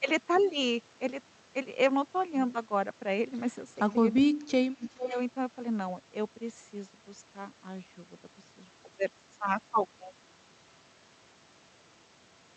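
From 4.23 to 5.15 s, the echo canceller likely mistook two-way talk for echo, causing speech suppressed in double talk: the voice dips by up to about 25 dB across roughly 0.7 s. From 4.83 to 5.19 s, an echo leak, likely from incomplete cancellation on a loudspeaker end, returns a copy delayed by 418 ms, about 10 dB below the speech.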